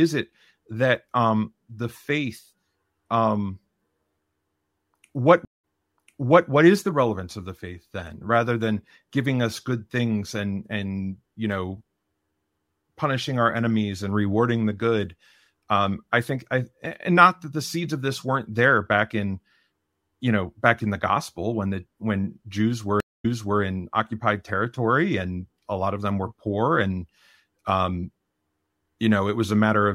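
Twice in this speech recording the stream connection dropped and the player reconnected with a new decoder mid-stream, a stream reconnect. At 5.45 to 6.49 s a 182 ms silence is followed by audio resuming 862 ms earlier, so a stretch of speech repeats. At 23.00 to 23.60 s a 236 ms gap ends with a 366 ms step back. Each time the fresh decoder's first frame fades in rather than starting at full level.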